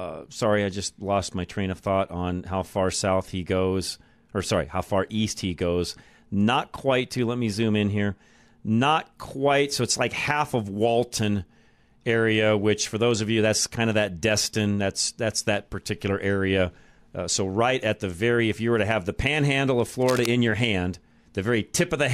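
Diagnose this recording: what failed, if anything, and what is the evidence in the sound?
Cable scratch noise, 20.02–20.26 s, after "have the panhandle of": uneven rustling about 10 dB under the speech, likely a worn analogue connector's fluctuating contact.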